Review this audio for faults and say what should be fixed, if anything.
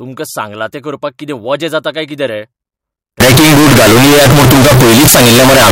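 From 3.20 s to the end, float read as integer: the speech turns into a loud, harsh, near-square wave at an almost fixed, high level, with background noise as loud as the speech. The likely cause is 32-bit float samples being read as 32-bit integers. To prevent it, make sure the reader's sample format matches the format the file was written in.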